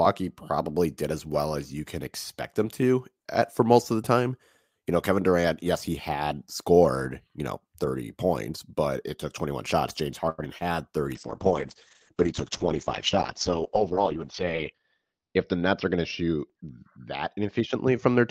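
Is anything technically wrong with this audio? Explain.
Yes, there are four kinds of fault, all clustered after about 10 seconds.

A short stall from a late packet occurs at 10.29 to 10.40 s. A packet arrived late, the jitter buffer ran dry, and the receiver held the last sound for 88 ms before resuming from the same point. Nothing is lost, but that sound lingers too long with a faint buzz or dip.

Short concealed packet loss hits at 10.44 s and again at 10.58 to 10.73 s, each time losing 20 ms of audio. The decoder patched each gap by extending the preceding sound and then blending back in, leaving a brief smear or wobble where that fragment should be.

A call bitrate drop begins at 11.16 s and lasts to the end. The encoder was pushed to far fewer bits, which fits a fall from about 40 to 8 kbps. The bandwidth was also cut to 6 kHz, so the speech becomes muffled and coarse, with the worst stretch lasting about 4.2 s.

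A jitter buffer speed-up runs from 13.75 to 14.83 s. With too much audio queued, the receiver trimmed many short pitch-period slices, about a tenth of a second in total. Speech plays at 108% speed with unchanged pitch and sounds hurried.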